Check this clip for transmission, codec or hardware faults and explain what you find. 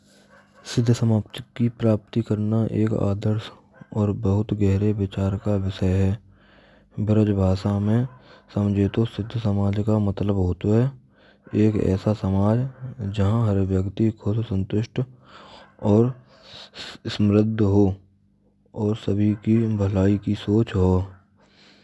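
No fault turns up anywhere in this speech recording. Nothing in the signal points to a problem in the chain that carried it.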